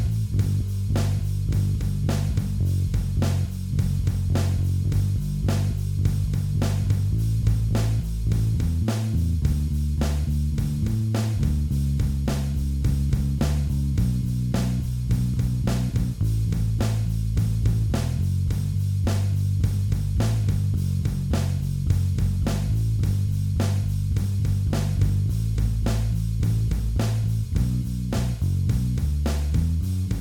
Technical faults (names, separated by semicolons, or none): none